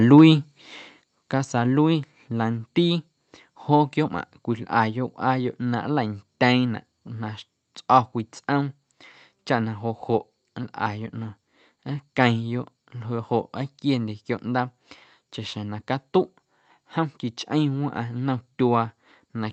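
From 0.18 to 0.22 s the loudest peaks are flattened, giving a brief harsh crackle. This is likely microphone overload: the input was driven about 2 dB past the converter's ceiling, so roughly one sample in twenty had its top sheared off.

At about 1.02 s the speech and the background noise drop together by about 6 dB in a single abrupt step. This is likely the microphone volume stepped down, an automatic correction that follows the distorted peak. It sits on top of an Opus call path whose audio stops at about 8 kHz.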